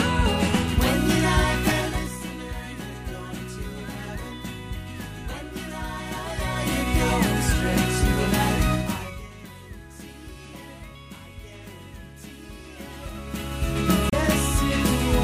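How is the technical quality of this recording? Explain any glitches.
There are two kinds of glitch here: three patches of zipper noise and a short burst of damaged data in the compressed stream near the end.

The zipper noise shows up at 1.67 to 2.23 s, where the level drops by about 10 dB, and again at 6.04 to 6.97 s and 12.73 to 13.93 s, where it rises by about 10 dB and about 20 dB. Each move is made in 2 dB jumps instead of a continuous ramp, at roughly ten steps a second in the first and around seven in the others. Every jump is a small discontinuity, so you hear a ticking, zippy texture riding on the sound while the level shifts.

Then from 14.10 to 14.14 s there's damaged data in the compressed stream. That stretch of the file got corrupted, so the decoder misread those frames, lost sync and had to hunt for the next valid frame header before it could carry on. What comes out is a quick glitch lasting roughly 40 ms.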